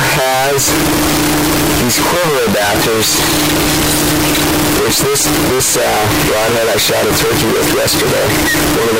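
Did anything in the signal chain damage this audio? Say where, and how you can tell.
Yes. The damage happened at the sample-format conversion stage and lasts the whole clip. This is a case of float read as integer: the audio is very loud and harsh from start to finish, and the background noise is as loud as the main sound. The waveform looks nearly square at an almost fixed, high level. The likely cause is that 32-bit float samples were read as 32-bit integers, so each value comes mostly from the sign and exponent bits rather than the signal's real amplitude.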